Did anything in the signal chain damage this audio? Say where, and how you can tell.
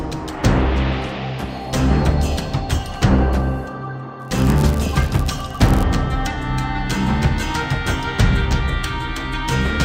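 Yes. Between 4.19 and 5.84 s a block size mismatch (padded) in the driver or buffer stage fills each short block out with zeros. That tiny gap repeats at 99.6 Hz, heard as a buzz, and the audio runs 0.996 times normal speed at roughly unchanged pitch.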